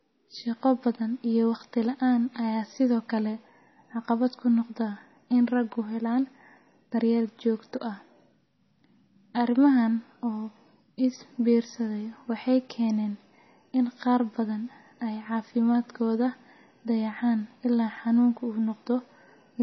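The clip is speech, and it is band-limited for its whole length. Nothing is present above about 5.9 kHz. The top end sounds dull and closed in, with the smeared, watery texture of heavy MP3 coding. The cause is likely low-bitrate audio saved at a high bitrate. The cut-off and artefacts point to a first MP3 pass at around 24 kbit/s. A later 320 kbit/s encode kept that damage and could not restore the lost highs.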